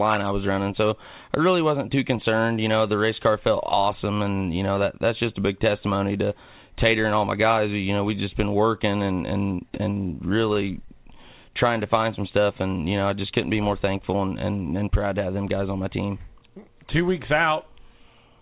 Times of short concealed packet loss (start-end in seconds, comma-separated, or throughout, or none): 10.85-10.90